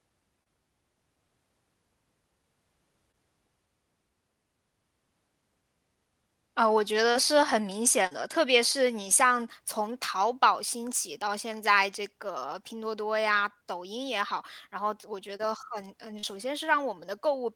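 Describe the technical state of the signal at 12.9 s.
At 12.9 s the speech is intact, with no dropout, glitch or other fault, only the ordinary character of a WebRTC call path carrying it through the codec and jitter buffer.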